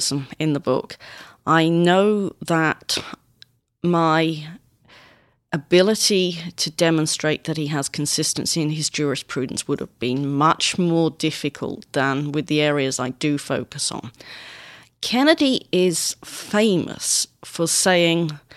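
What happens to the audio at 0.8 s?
Nothing goes wrong at 0.8 s; the speech runs through that moment intact.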